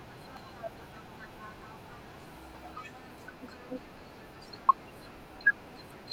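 At 0.37 s and again at 2.54 s, the speech is hit by brief blips typical of damaged data in a compressed stream, and a longer one follows from 4.69 to 4.72 s. Corrupted bytes make the decoder misread frames and lose sync until it finds a valid header again.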